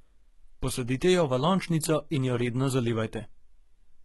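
From start to finish, the speech carries heavy codec damage, with nothing above 11.8 kHz, and the likely cause is HE-AAC compression at a rate that fits about 16 kbps. Only the lower band is truly coded. The treble is synthesised by copying lower bands upward under a coarse envelope, so s sounds come out gritty and lispy rather than dull. That brittle, misaligned brightness separates it from a plain low-pass, which simply removes the top.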